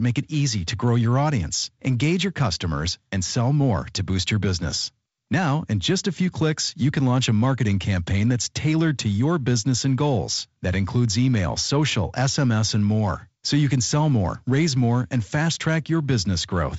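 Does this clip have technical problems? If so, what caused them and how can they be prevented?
No, this speech clip has no technical problems.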